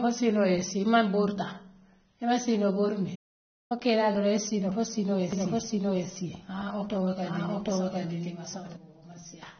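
Speech throughout carries AAC compression damage: a dull, smeared, warbling texture, likely low-bitrate AAC-LC around 24 kbps rather than a simple low-pass, which would leave no fizz. A playback stall at 3.15 s goes silent for about 0.55 s after "imaŋ siinoo bori" and resumes with "kee laa doroŋ", likely a data underrun. From 5.33 to 8.77 s a doubled audio track adds a second copy at about equal level, roughly 0.7 s behind, likely a second capture path, dry and abruptly switched, unlike a room echo.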